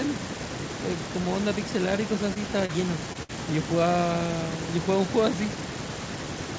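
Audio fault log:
2.34–2.37 s, 2.65–2.71 s and 3.13–3.17 s, short concealed packet loss: audio for 20 to 40 ms at a time arrived too late for the decoder, so the receiver extended the preceding sound and blended back, leaving brief smears or wobbles where detail drops out.
3.23–3.31 s, burst of packet loss: 60 ms of audio was lost in a row. The receiver stretched the last sound and faded it down, heard as a held buzz or fading hiss, then playback resumes further on with that stretch gone.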